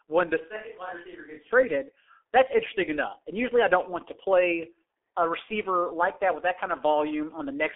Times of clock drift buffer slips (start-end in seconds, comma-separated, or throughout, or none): none